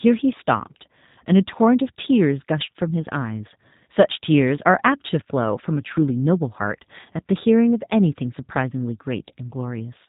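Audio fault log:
throughout: G.729 codec. The speech is rebuilt from a filter and sparse pulses, so it sounds rough and synthetic. The spectrogram is cut off at 4 kHz, which fits narrowband G.729 at 8 kbit/s.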